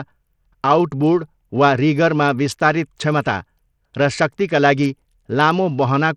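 From the first moment to the end, the speech carries plainly audible codec damage. The likely cause is Bluetooth SBC compression at a small bit pool, with a sound that fits a rate near 80 kbps. The codec splits the signal into a few wide bands and spends too few bits on the top ones. So the treble thins out and flickers. The lower bands are coarsely quantised. A gritty noise and some aliasing ride along with every syllable.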